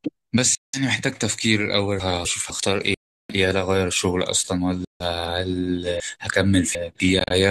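At 0.55 to 0.80 s the speech drops to silence for about 0.18 s, and it comes back further along rather than where it broke off. This is likely a Bluetooth dropout, where audio packets reached the headphones too late and were thrown away, leaving a hole with abrupt or briefly faded edges while the stream kept moving. The same gap recurs at 2.94 to 3.30 s for about 0.35 s, the longest, and at 4.85 to 5.04 s for about 0.15 s. At 7.19 to 7.32 s it breaks up as several short cuts spread over roughly 0.11 s, none longer than about 30 ms.

Between 2.0 and 2.5 s, chunks play out of order. Audio moves in 250 ms blocks, and one block was written one position late, so two neighbouring quarter-second pieces play swapped. Nothing is missing, but the speech briefly jumbles. From 6.0 to 7.0 s a block lands three positions late, so that piece plays after the three blocks meant to follow it. This gives a longer scramble.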